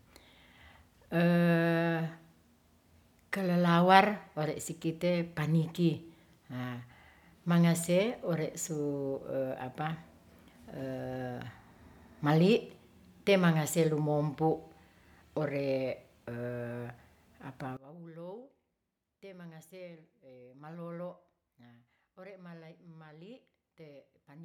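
From 17.77 s right through to the end, the speech falls away by about 22 dB, the centred voice nearly gone. That's likely one channel inverted, so everything shared between left and right cancels when summed to mono.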